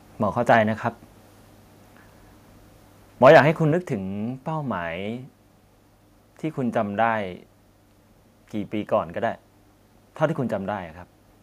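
Around 0.53 to 0.55 s, and again from 3.25 to 3.4 s, the loudest peaks are flattened and crackle harshly. This is likely microphone overload, with the signal driven about 2 dB and then about 5 dB past the converter's limit. At 3.72 s the level drops suddenly by 5 dB, likely the microphone volume stepped down by the call software after the clipped peak.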